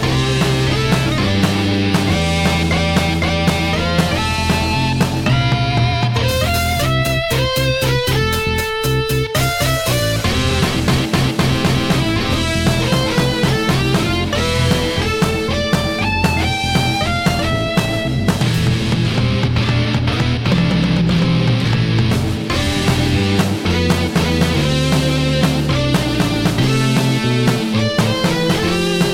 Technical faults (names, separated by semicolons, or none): none